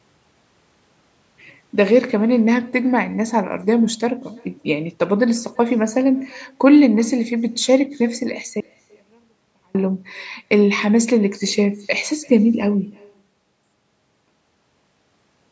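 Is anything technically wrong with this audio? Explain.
Yes. There are two faults in this speech recording.

Echo with no canceller runs through the whole clip. Every phrase is followed, roughly 300 ms later, by a faint, thinner copy of itself sitting about 29 dB below the direct speech. The far end is evidently playing the call over a loudspeaker, its microphone is recapturing that playback, and no echo canceller is removing it before it returns across the network. The result is a quiet, thinner shadow trailing each word.

An audio dropout to a faint residue occurs from 8.60 s to 9.75 s, lasting about 1.14 s. The speech cuts out abruptly rather than pausing or fading, and the gap is not silent. It holds only a faint sound roughly 40 dB below normal level. The likely cause is a brief loss of the signal feed while the downstream path stayed open, so only faint sound passes through until the speech snaps back in. 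The call microphone processing, with nothing above 8 kHz, is normal.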